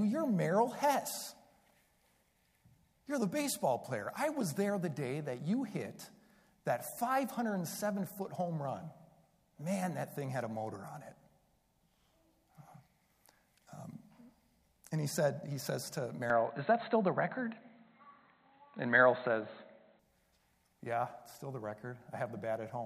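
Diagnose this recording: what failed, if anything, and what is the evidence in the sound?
The failure sits at the driver and device-selection stage: the input was likely switched mid-recording to a poorer device, then restored. From 16.30 s to 19.99 s the sound turns dull and boxy, with nothing above 4.1 kHz, a level step of about 5 dB, and a faint new background noise well below the signal. The change in both directions is instant, with no silence at either switch. The narrow band and altered tone come from the substitute device's own limited capture chain.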